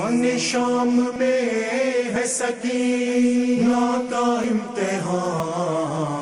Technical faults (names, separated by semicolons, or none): dropped buffer (overrun)